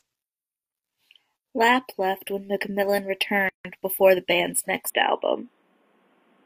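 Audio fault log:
3.49–3.65 s, gap at a join of encoded pieces: the speech drops out for about 159 ms, with hard edges that the codec blurs, and resumes just before "before the band's", continuing from where it stopped. Separately encoded segments were joined without trimming. The encoder's start-up delay and the padding of the previous segment's final frame both remain as silence at the seam. The join position fits segments about 6 s long.
4.90 s to end, input switched to a poorer device: after "before the band's" the speech abruptly turns duller and boxier, with nothing above 3.8 kHz and a new noise floor roughly 45 dB below the speech. There is no silence at the change, and the level stays about the same. The most likely cause is a change of input mid-recording to a narrower-band microphone or a headset call profile, which has its own tone and background noise.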